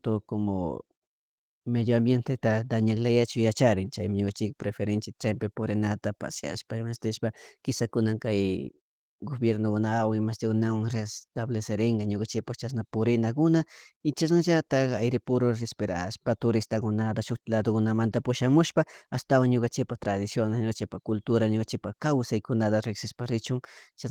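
No faults; the speech shows only light Opus coding wear, hybrid mode with full bandwidth, consistent with a rate near 20 kbps.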